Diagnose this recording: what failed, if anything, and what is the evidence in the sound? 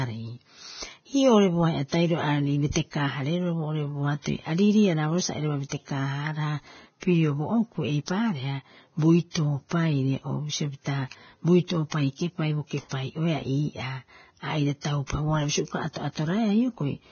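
Codec stage: the speech is hissy and grainy all the way through, with roughened tones and nothing above 6.6 kHz. That's likely heavy Vorbis compression: the treble is quantised so coarsely that fine detail turns into noise, which fits a bitrate of around 17 kbps.

There's also a pre-echo from the same codec, just after "sa airaba", running 5.69 to 5.72 s. About 28 ms of hiss creeps in ahead of an attack, because noise sized for the loud onset spread across the whole block and into the quiet bit before it, softening the hit.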